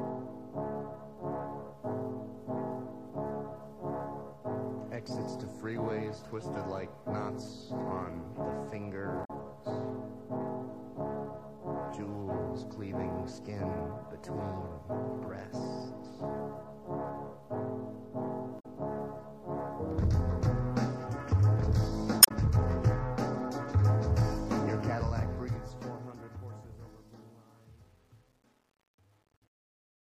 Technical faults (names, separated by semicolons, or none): damaged data in a compressed stream; truncation distortion on a fade